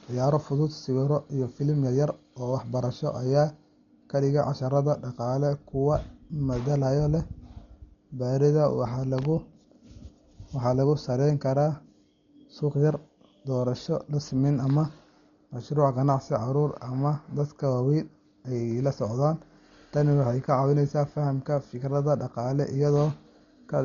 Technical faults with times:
0.00-23.85 Dolby Digital compression

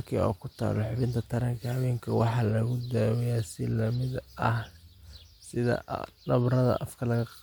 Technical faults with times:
none

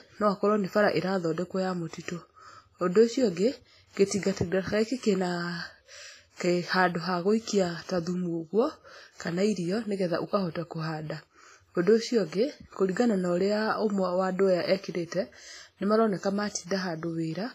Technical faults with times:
0.00-17.55 WMA compression

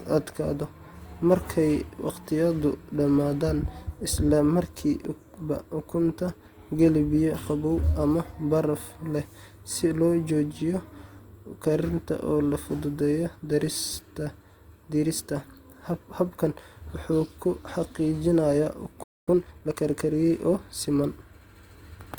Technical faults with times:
5.05 block of digital silence
19.03-19.28 playback stall
19.28-19.74 time-compressed catch-up

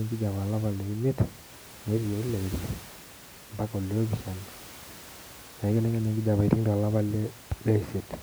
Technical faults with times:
none

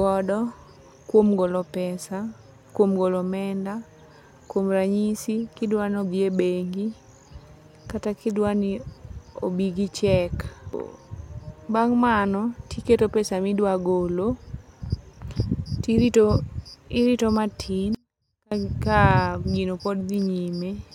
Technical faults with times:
17.95-18.52 audio dropout to a faint residue

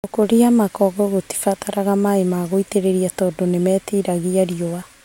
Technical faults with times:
none

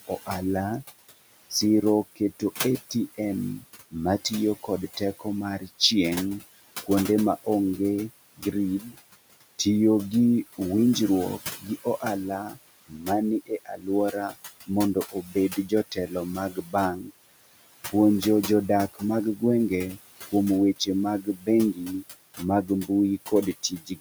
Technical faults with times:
0.00-24.01 noise suppressor artifacts
2.16-5.81 speech cut by the noise suppressor
8.35-8.96 speech cut by the noise suppressor
11.46-17.11 speech cut by the noise suppressor
17.90-19.42 speech cut by the noise suppressor
19.96-24.01 speech cut by the noise suppressor

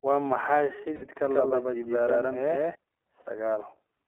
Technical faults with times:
0.00-4.08 iLBC codec
0.00-4.08 sample clock jitter
0.96-1.05 lost iLBC frames
1.23-2.75 doubled audio track
3.21-3.28 lost iLBC frames

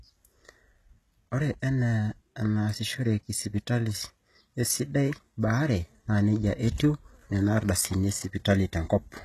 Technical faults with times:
0.00-9.25 HE-AAC compression

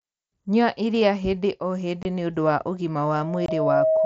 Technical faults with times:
2.03-2.05 unconcealed Bluetooth headset packet loss
3.02-4.05 loudspeaker feedback squeal
3.46-3.49 unconcealed Bluetooth headset packet loss

